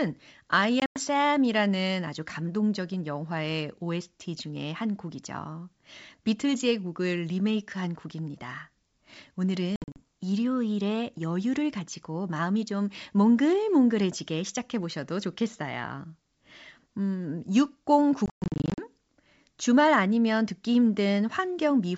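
A speech recording on a G.722 wideband link, clear up to about 7 kHz, has packet loss on an ADPCM call at 0.80–1.01 s, 9.76–10.02 s and 18.26–18.85 s. Each burst leaves hard-edged silent holes totalling 120, 140 and 340 ms. The longest single gap is 120 ms, in the last burst. After each hole the decoder's predictor and step size no longer match the sender's, so the sound comes back slightly distorted before settling.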